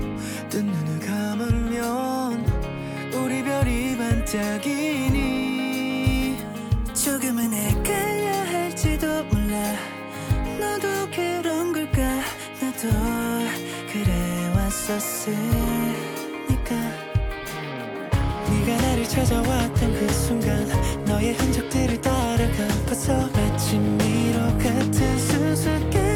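From 6.04 to 8.04 s the audio has pre-emphasis left on: a CD-style 50/15 µs treble boost, about 8 dB at 10 kHz, was never de-emphasised, so it sounds thin and bright. On a spectrogram the upper bands glow noticeably hotter for that stretch.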